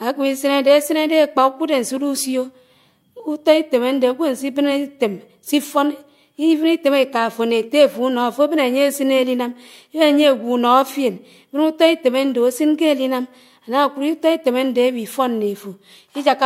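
Nothing in the recording stood out as a technical problem on listening.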